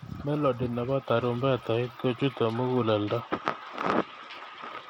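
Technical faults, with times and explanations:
Throughout, Bluetooth SBC compression: the link was likely squeezed to a small bit pool, consistent with about 96 kbps, so the upper sub-bands get few or no bits. The speech's treble flickers and drops away, with plainly audible gritty noise and aliasing.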